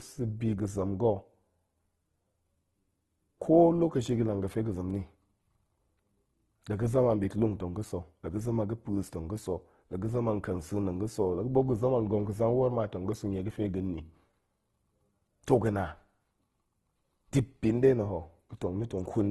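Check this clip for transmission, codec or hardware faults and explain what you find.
One codec fault is present throughout the clip. Opus compression: the speech sounds grainy and rough, with nothing above 12.2 kHz. This is likely Opus in music mode at around 16 kbps, filling starved bands with folded or noise-like content.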